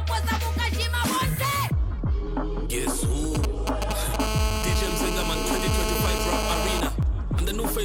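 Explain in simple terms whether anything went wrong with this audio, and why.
From 3.35 to 4.16 s a galloping dit-dit-dit of short buzzes cuts in over the sound. These are GSM signalling bursts: a nearby 2G phone was talking briefly to its network, and the audio circuitry picked up its radio pulses, turning them into a 217 Hz buzz.

Right after, from 4.20 to 6.81 s, the buzz becomes a steady, harsh, raspy drone unrelated to the sound itself. This is GSM phone buzz: the same phone is now on a call, transmitting 217 times a second without pause, and the circuitry keeps rectifying those bursts into audible noise.

At 7.02 s the sound briefly stops. This is an underrun with held sample: the playback buffer ran dry, so the output froze at its last value for about 1.5 ms. A sliver of audio was skipped.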